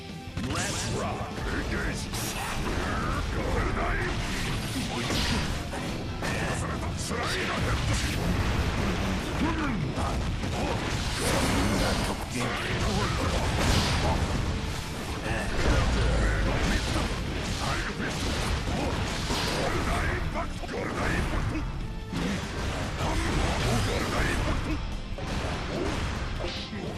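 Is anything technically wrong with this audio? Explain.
No, nothing technically wrong can be heard here.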